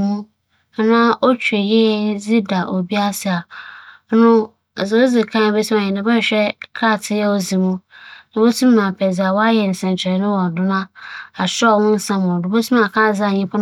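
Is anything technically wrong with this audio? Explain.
No, nothing technically wrong turns up here; the speech comes through without any faults to point to.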